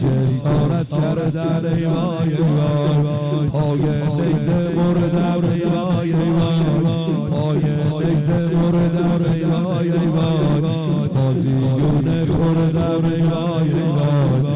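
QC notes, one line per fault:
No faults found; the audio has passed through a narrowband call path, likely G.711 mu-law, with nothing above 4 kHz.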